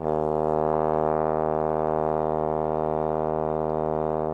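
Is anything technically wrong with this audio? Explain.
No, this music shows no technical faults: levels, timing and frequency content hold steady throughout, with nothing in the signal pointing to a problem in recording, processing or playback.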